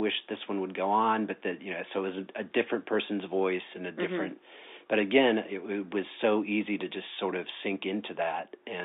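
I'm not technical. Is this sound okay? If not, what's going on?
Yes, nothing stood out on listening; it sounds like an ordinary telephone line.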